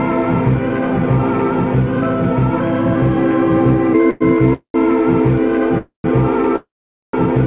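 The music arrives narrowband, with nothing above 4 kHz, which fits a G.711-style call path. Call audio freezes occur at 4.10–4.22 s, 4.53–4.76 s, 5.78–6.06 s and 6.56–7.15 s. Each time, the last sound is stretched into a fading buzz or hiss. From the second freeze on, it decays to silence: about 0.09, 0.13 and 0.47 s. The music then resumes where it stopped, likely after the jitter buffer ran dry, so each freeze adds delay without losing material.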